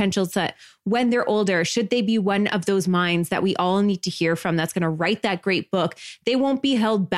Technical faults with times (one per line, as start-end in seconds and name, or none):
none